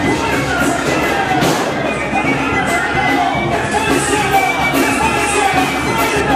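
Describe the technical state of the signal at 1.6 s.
At 1.6 s the signal is intact, with no audible fault at that moment.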